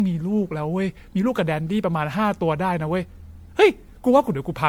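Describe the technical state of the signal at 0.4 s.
At 0.4 s the speech shows generation loss, as it does across the whole clip. The sound is swirly and hollow, consonant attacks are smeared, and nothing remains above 19.9 kHz. The likely cause is repeated lossy re-encoding, about ten MP3 passes, with a character that fits 96 kbit/s. Each pass requantises on a shifted frame grid, so noise and spectral holes accumulate beyond what one encode at that rate would leave.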